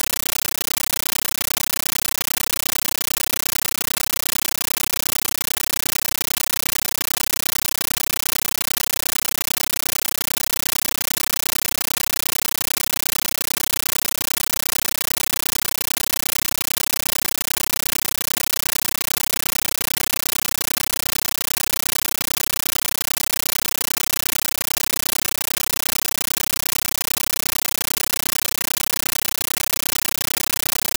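Throughout, the sound is replaced by very loud, chattering static: a compressed stream played as audio. An AC-3 bitstream was treated as ordinary samples instead of being decoded. Each frame becomes a 13.3 ms noise burst followed by silence, 31.25 times a second, and that rigid rhythm sets it apart from random noise or hiss.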